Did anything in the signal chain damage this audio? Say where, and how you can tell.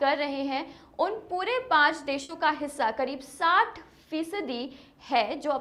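Yes, a burst of packet loss at 2.23 to 2.32 s, a network fault. For about 60 ms the receiver stretches the last sound and fades it out, then the audio resumes with roughly 60 ms skipped, so the sound jumps ahead instead of continuing.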